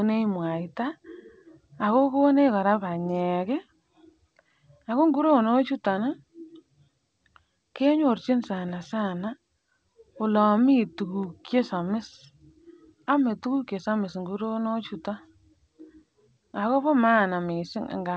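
No technical faults occur anywhere in the speech, which comes through a G.722 call path at 64 kbps with nothing above 8 kHz.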